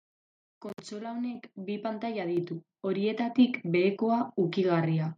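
Speech here, and the microphone volume gets stepped up three times: about 6 dB at 1.35 s, 5 dB at 2.37 s, 3 dB at 3.39 s, voice and background jumping together.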